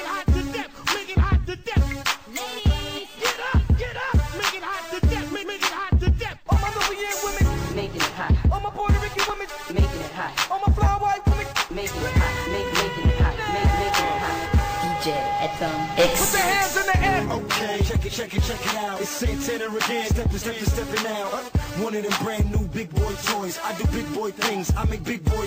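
Clock slip clicks run from 0.11 s to 25.32 s as faint, evenly spaced ticks, roughly two or three per second, with dozens across the span. The likely cause is two devices running on unsynchronised clocks that disagree by something like 70 parts per million, so each time the drift adds up to a whole sample, one sample is dropped or repeated. Each tick is a tiny one-sample discontinuity.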